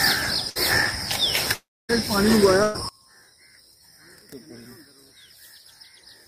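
At 0.49 s and again at 2.63 to 2.76 s there is a burst of packet loss. The last sound is stretched into a short fading buzz or hiss, about 60 ms and then about 110 ms, and playback resumes with that stretch missing. The gaps are too brief to reach true silence.

From 1.53 to 1.91 s the concealed tail fades out and roughly a quarter second of silence follows before the sound returns, with about 360 ms lost. A gap that long and that silent points to a likely long network dropout, not a short burst.

From 2.89 s to the end the level falls by about 30 dB to a faint residue that never recovers. That distinguishes it from a dropout, which would go silent and then come back. One channel inverted, cancelling in a mono sum, is the likely cause.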